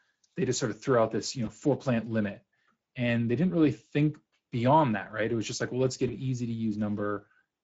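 The whole clip carries Speex codec damage, and it's plainly audible: the speech has that grainy, hoarse CELP texture because the excitation is getting coarsely coded. It fits a mid-quality mode around 16.8 kbps.

At about 1.45 to 1.49 s there's VoIP packet loss concealed by the speech codec. The decoder fills the gap by stretching its last pitch and filter into a short buzzy tone or coloured noise that fades. It sounds like a single lost 20 ms frame, and the voice stays weak or distorted as it recovers. The same thing happens again at about 6.07 to 6.16 s, with a similar brief fading fill and dip while the decoder rebuilds itself.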